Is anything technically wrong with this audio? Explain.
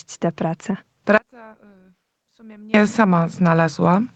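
Yes. Gain pumping runs through the whole of this speech clip. The level keeps rising and falling by about 5 dB as the speech gets louder and softer, so quiet and loud passages sit closer together and the sound comes across as squashed. The likely cause is an input gain set far too high, with a fast limiter or compressor pulling the level down on each loud sound and letting it climb back in the gaps. The band limit at 8 kHz comes from the call path and is expected.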